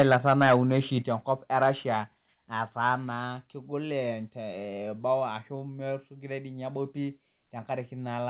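Microphone overload runs from 0.0 to 0.56 s, just before "oshi te enkop e", and again at 1.62 to 1.67 s. The input was likely driven past the converter's ceiling, by about 6 dB and then about 1 dB. A few percent of samples are flattened, giving loud syllables a harsh, crackly edge.

Microphone volume stepped down at 0.02, 1.02, 2.04 (after "oshi te enkop e") and 3.06 s (before "kegol eboo"). These are abrupt level drops of about 4, 6, 4 and 2 dB, likely the call software cutting input gain in response to the clipping.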